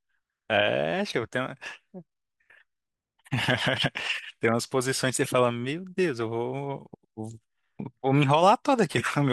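Nothing in this bit of speech trips the ear as a technical fault, so there's nothing here to flag.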